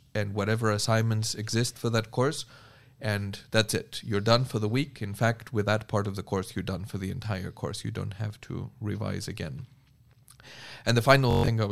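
Near the very end, from 11.31 to 11.48 s, the speech breaks into a rapid machine-gun buzz: a Bluetooth stutter. Packets arrived late or not at all, so the receiver kept replaying its last short buffer. About 149 ms of audio went missing over roughly 171 ms, with the longest unbroken gap lasting 128 ms. Unlike a plain dropout, the gap is filled with a repeating fragment rather than silence, and the speech resumes further along, as if it had kept playing underneath.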